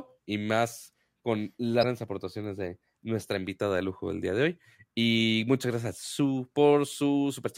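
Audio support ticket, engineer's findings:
Damaged data in compressed stream, 1.79–1.85 s, about 54 ms in the speech. Short glitch. Probable component: compressed file or transport feeding the decoder. Mechanism: corrupt bytes misread as audio frames, decoder loses sync, hunts for next valid frame header, then resumes. Spectrogram: brief vertical smear or gap, clean edges before and after. Waveform: abrupt discontinuity.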